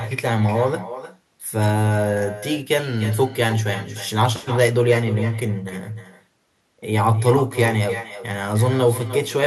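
From start to finish there's echo with no canceller. The far end is clearly playing the call out loud, their mic is catching it, and nothing's stripping it back out, so every phrase returns after the network round trip, around a third of a second later. The copy sits about 13 dB below the talker, so you hear it as a thinner shadow trailing each line.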